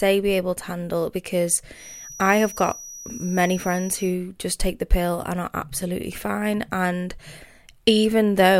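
From 1.72 s to 4.17 s, just after "able to handle because" and ending before "just take the pill", a feedback whistle sits behind the speech: a thin, steady tone at 5.8 kHz, about 20 dB below the speech, swelling and fading slowly in level. The likely cause is a loudspeaker-to-microphone loop held right at the edge of feedback, with enough gain to sustain that one frequency but not enough to make it run away.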